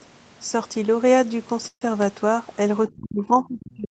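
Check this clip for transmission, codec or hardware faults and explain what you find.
Two faults stand out in this speech clip, both from the call chain rather than the recording hardware. The audio stays within 8 kHz throughout, consistent with a wideband call codec such as Opus at a moderate bitrate.

Call audio freeze, 1.67 to 1.83 s: The speech stalls and the receiver fills about 140 ms. That is most likely because packets were delayed in transit and the jitter buffer ran dry. The last sound is stretched into a brief fading buzz or hiss, then roughly 70 ms of silence. Speech then resumes exactly where it left off. Nothing is lost, but everything after this point arrives about 140 ms later.

Speech suppressed in double talk, 2.88 s to the end: From here the talker's level collapses, with the deepest dips around 40 dB. The likely cause is the far end talking at the same time. The echo canceller could not tell this talker apart from its own loudspeaker echo, so it clamped down on everything it picked up.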